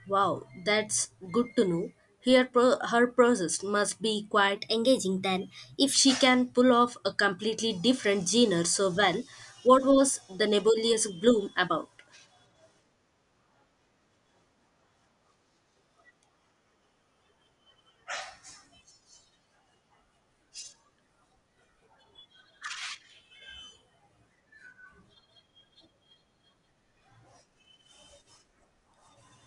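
A speech recording with a wrong sample rate fault between 4.56 and 5.94 s. Over that stretch the audio runs about 1.09 times fast and sits roughly 1.5 semitones sharp, so it sounds slightly high and hurried. Speed and pitch shift together by the same ratio, which fits samples captured at 22 kHz being played out at 24 kHz without any rate conversion.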